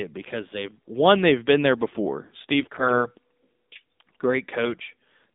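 AMR narrowband mobile codec coding runs through the whole speech clip. The sound is confined to roughly 200 Hz to 3.7 kHz, and the vocal-tract model rebuilds each 5 ms from a few pulses, leaving a plainly audible buzzy, synthetic edge that points to a low mode near 7.4 kbps. AMR bit errors hit from 2.61 to 3.06 s. Corrupted low-priority bits, at an error rate of around 7 percent, misplace the excitation pulses and skew the finer pitch, gain and spectral values across roughly twenty frames, so pitch and level hold while the speech turns hoarse, scratchy and gargly.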